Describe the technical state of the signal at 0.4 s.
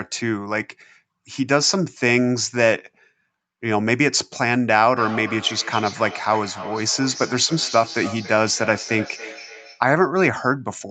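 At 0.4 s the speech signal is intact, with no fault present; the band-limiting to 8 kHz heard there comes from the normal call microphone processing and the Opus call path.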